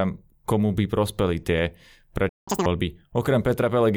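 At 2.29 s the speech cuts out dead for about 180 ms, until 2.48 s. That's a playback stall, most likely the player starving for data or its thread getting blocked. Right after, from 2.48 to 2.66 s, you get catch-up at higher speed: the backlog plays at double speed, with the pitch jumping roughly ten semitones, then snaps back to normal.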